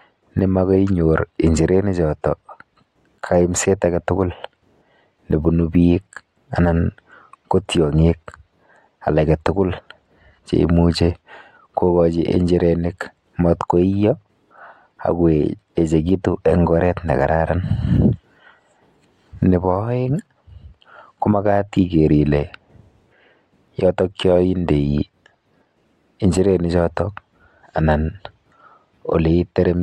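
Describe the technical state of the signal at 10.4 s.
At 10.4 s the signal is intact, with no audible fault at that moment.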